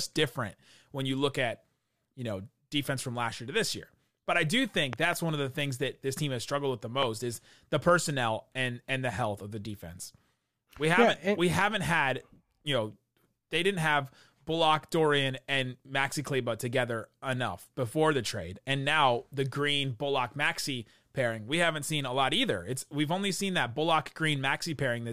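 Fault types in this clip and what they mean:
Loud pop: a sharp transient laid over the speech, likely from a sudden voltage step such as a switch or static discharge. A double pop follows "I do" at 4.93 s, and a single one follows "has struggled with the" at 7.03 s. Both stand well above the speech, which continues underneath.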